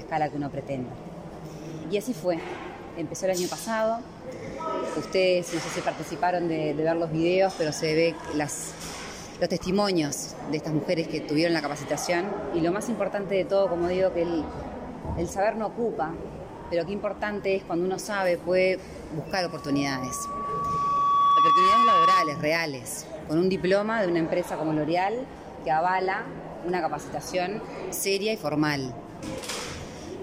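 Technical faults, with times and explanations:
19.32 to 22.52 s: loudspeaker feedback squeal at 1.1 kHz. The microphone hears its own loudspeaker, and at this frequency the loop gain passes one, so a tone swells over about two seconds to roughly 10 dB above the sound. A spectrogram shows one horizontal line that grows brighter.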